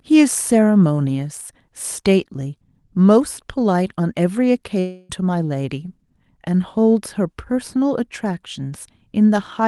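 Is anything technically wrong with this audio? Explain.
Yes. From 4.79 to 5.11 s there is a gap of about 0.3 s that sounds like a long network dropout. No audio appears to have arrived for that stretch, likely because packets were lost, so the receiver filled nearly the whole gap by extending the last sound as a buzzy, fading tone. The speech then resumes with that 0.3 s missing. A spectrogram shows smeared, repeating harmonic bands that blur and weaken before normal speech texture returns. The waveform shows a smooth, decaying envelope with no true silence. The call-codec processing around it, consistent with Opus, leaves content above 12 kHz absent.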